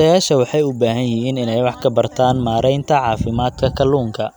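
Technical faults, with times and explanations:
No technical faults can be heard; the speech signal stays continuous, with no breaks or added disturbances.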